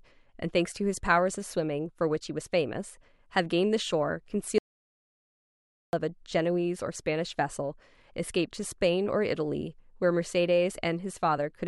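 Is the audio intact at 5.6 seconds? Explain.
No. From 4.58 to 5.93 s the speech cuts to dead silence with no room tone, an audio dropout to silence, likely from the input being lost while the recorder kept writing silence.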